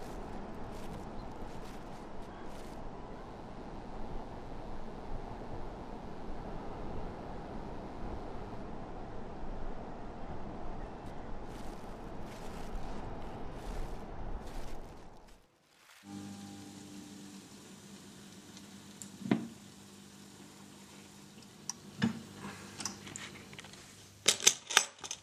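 From 3.13 to 8.63 s, raspy mains buzz runs about 30 dB down: 60 Hz switching spikes, twice per cycle, with harmonics reaching kilohertz.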